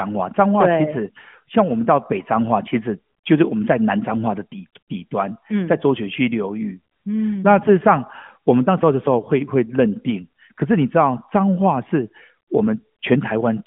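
No technical faults can be heard in the speech, which carries the narrow telephone-style bandwidth of an AMR narrowband mobile codec, running from about 150 Hz to roughly 3.4 kHz with nothing above about 3.6 kHz, consistent with the codec's 12.2 kbps mode.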